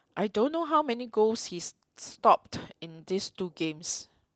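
The clip is speech with nothing technically wrong with it.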